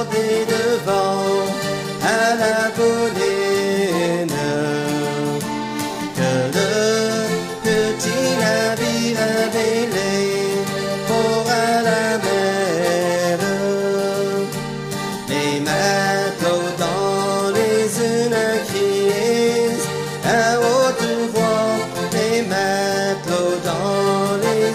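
Nothing here stands out as a technical fault: the audio just runs along without any glitch, dropout or other problem catching the ear at any point.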